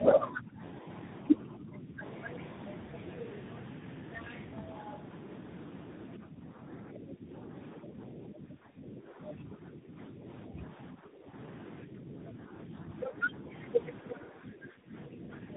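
Rough, muffled and warbly speech with nothing above 3.8 kHz runs through the whole recording: tandem speech coding, as AMR-NB at 7.95 kbit/s, G.711 mu-law and CVSD each re-code the previous decoder's degraded output. The talker dips by roughly 10 dB from 0.00 to 0.86 s, 1.37 to 2.02 s, 10.9 to 11.36 s and 14.02 to 15.3 s, and more gently from 11.85 to 13.49 s. This is likely speech suppressed in double talk, with the echo canceller attenuating the near voice while the far side talks. From 2.03 to 3.59 s a second voice sits about 10 dB below the talker, likely the other side's voice leaking through from the loudspeaker because echo cancellation was incomplete.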